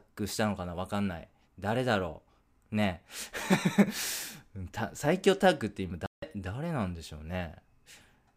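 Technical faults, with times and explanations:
6.06–6.23 s, digital broadcast dropout: the speech snaps to silence with a fade of only about 3 ms, leaving a 160 ms hole before returning mid-programme. The receiver muted after failed frames, which fits roughly five lost frames, and that audio is gone.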